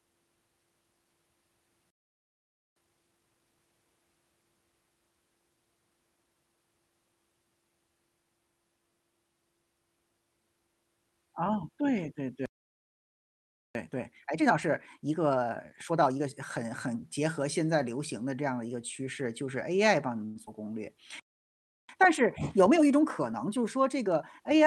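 Speech carried over a call path whose Opus coding keeps content up to about 12 kHz shows three playback stalls, at 1.90 to 2.76 s, 12.46 to 13.75 s and 21.20 to 21.89 s. The sound cuts out mid-flow for 0.86, 1.29 and 0.69 s, most likely because the player ran dry or its thread was blocked, then resumes where it stopped. The complete silence marks these as stalls rather than freezes. Each stall is followed by time-compressed catch-up, where the player works through its backlog by cutting and cross-fading small pieces: 2.76 to 3.60 s runs at 2x, 13.75 to 16.33 s at 1.5x, and 21.89 to 24.60 s at 1.25x. The speech sounds hurried at unchanged pitch, which sets it apart from a plain speed change. At 20.25 to 20.38 s a call audio freeze stretches the last sound into a buzz or hiss lasting about 0.1 s, likely caused by held-up packets emptying the jitter buffer. Nothing is lost, so it adds a gap instead of removing audio. 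Just after, at 20.46 to 20.49 s, a skip ahead drops around 70 ms and joins the two sides almost directly, so sound goes missing rather than being filled. Inside the last catch-up, 22.57 to 23.65 s, a jitter buffer speed-up trims about 50 ms in tiny pitch-period pieces, giving 104% speed.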